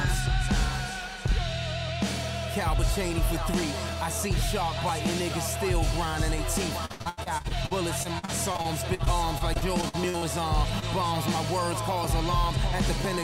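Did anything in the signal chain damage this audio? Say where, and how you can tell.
Yes. Three separate faults show up, at the driver and network stages.

Periodic USB or driver dropouts affect the driver or buffer stage. Regular ticks start at 0.89 s and recur about once a second until 13.05 s, roughly fifteen in all. Each one is a tiny skip of around 2 ms. Nothing fills the hole, so the waveform jumps and clicks. The steady one-second spacing points to a background task stalling the USB bus or audio driver on a fixed schedule.

Repeated packet loss (robotic sound) is a network fault. From 6.85 s to 10.24 s the audio turns choppy. There are 24 separate holes, the longest about 80 ms, with 620 ms missing in total. The receiver patched them by extending the preceding sound, 782 ms of fill, about 23% of that stretch. The gaps come too close together for the patches to blend back in, which gives the robotic texture.

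Short concealed packet loss, also a network fault, appears from 10.80 s to 10.84 s. About 20 ms never arrived in time. The decoder stretched the last sound over roughly 22 ms and then rejoined the real signal. This one is isolated and brief, so it comes across as a small smear or wobble rather than sustained choppiness.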